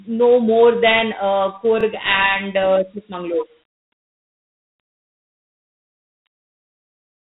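A speech recording carrying Dialogic VOX ADPCM coding throughout. Nothing is heard above about 3.8 kHz, and a gritty hiss rises and falls with the speech, plainly audible. The 4-bit quantiser is coarse, which fits 8,000 samples a second at 32 kbps. Because this hiss tracks the level rather than sitting at a steady floor, it sets this apart from plain band-limiting. Overlapping chunks appear from 1.81 to 1.83 s, right after "know more than uh", where a 23 ms piece plays twice as a chunk starts before the previous one ended. Nothing is lost, so this is a brief stutter rather than a dropout gap.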